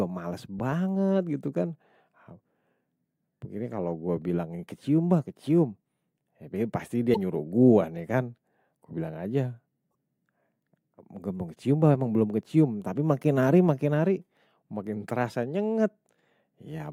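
Damaged data in a compressed stream corrupts two short stretches of this speech, at 7.12 to 7.17 s and at 9.88 to 9.90 s, just after "bilang aja". The decoder misreads those frames, loses sync and hunts for the next header, leaving a brief squawk or blip each time.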